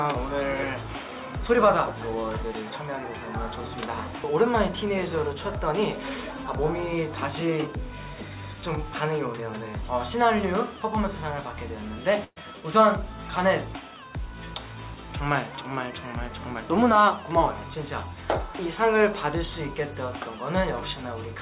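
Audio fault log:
12.24 to 12.38 s, burst of packet loss: a run of packets went missing or arrived too late. The receiver papers over the hole by stretching the last bit of sound for about 120 ms and fading it down, then leaves roughly 20 ms of silence before picking up again. About 120 ms of real audio is simply gone, so you get a smeared, dying tail and a jump. The band stops around 4 kHz, which fits a G.711-style call codec.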